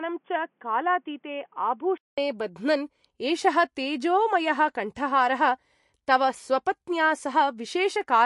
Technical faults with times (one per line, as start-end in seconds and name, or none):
0.00-8.26 MP3 compression
0.00-2.18 input switched to a poorer device